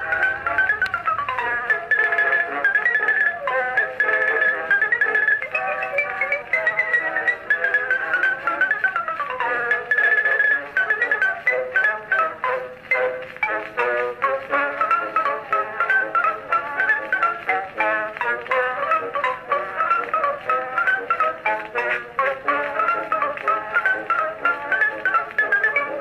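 No technical faults can be heard anywhere in the recording; the signal holds steady throughout, with no dropouts, distortion or other disturbances.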